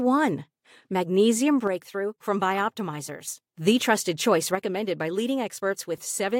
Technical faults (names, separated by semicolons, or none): one channel drops out